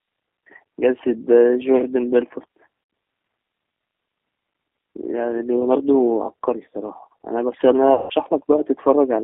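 Throughout, the speech passes through a low-rate G.729 codec, apparently at 8 kbit/s, over a line limited to about 250 Hz to 3.5 kHz. The vocal tract filter and sparse pulse excitation rebuild each frame coarsely, leaving plainly audible roughness and a thin, synthetic edge.

VoIP packet loss concealed by the speech codec then occurs twice. From 2.84 to 2.90 s, about 60 ms goes missing, and from 7.94 to 8.11 s about 160 ms, consistent with three and eight lost packets. Each time the decoder extends its last pitch and filter at falling gain, so the sound smears into a fading buzzy tone or coloured noise that stays weak briefly after audio resumes.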